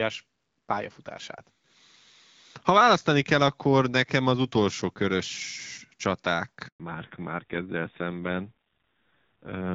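At 6.68 s a handover gap cuts the speech for 120 ms as the call switches networks; the waveform drops to flat silence until 6.80 s. From 6.80 s, fallback to narrowband takes over, moving from HD Voice at a rate consistent with 12.65 kbit/s to a low-rate narrowband codec: the spectrogram shows nothing above 4 kHz, and the speech turns dull and rough.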